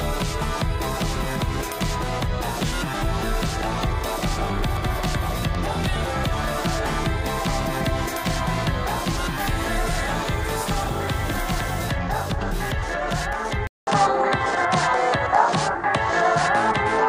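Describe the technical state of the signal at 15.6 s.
At 15.6 s the sound sits inside a change that runs from 13.67 s to the end. A 200 ms gap, then duller, band-limited audio with nothing above 10.5 kHz. The level shifts by around 5 dB, with new background noise. The likely cause is an input switched to a poorer device.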